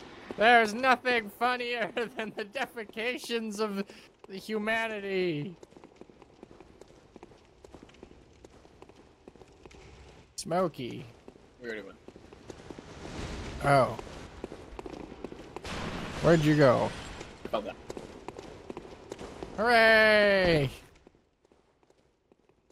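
From 0.84 to 1.86 s and again from 20.53 to 21.27 s, zipper noise: the level drops in unsmoothed 3 dB steps, about 10 dB at roughly three steps a second, then about 20 dB at roughly ten a second. Each jump produces an audible tick.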